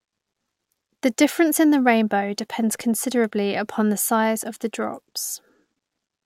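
No technical faults can be heard in this recording.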